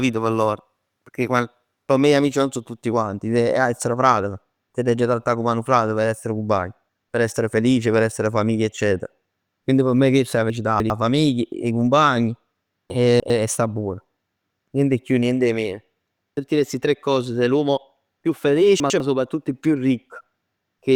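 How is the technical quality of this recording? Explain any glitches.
The speech has three brief scrambles from chunks out of order, at 10.5–10.9 s, 12.9–13.3 s and 18.8–19.0 s. A 100 ms chunk plays three chunks late (one late at 18.8 s), giving jumbled syllables at the hard joins.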